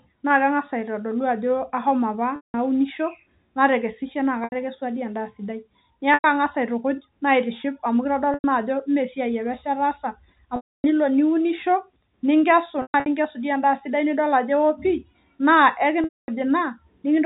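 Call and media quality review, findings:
Packet loss with pitch repetition: buzzy held tone, longer gaps fading to silence, at 2.36 s (180 ms), 4.44 s after "natekesishe naa" (80 ms), 6.14 and 8.34 s (100 ms each), 10.56 s (280 ms), 12.82 s (scattered over 240 ms), and 16.04 s (240 ms). The jitter buffer and concealment are repeating the last pitch period and then fading. The narrowband G.711 sound is fine.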